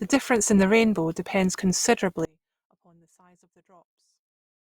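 At 2.25 s the speech abruptly drops to a faint residue roughly 35 dB down until the end, likely a signal loss with the path still live, unlike a fade.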